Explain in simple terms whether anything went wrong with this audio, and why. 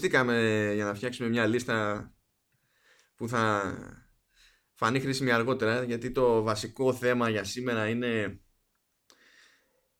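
Nothing went wrong here: the recording of speech comes through steady and intact, with nothing in the signal pointing to a technical fault at any point.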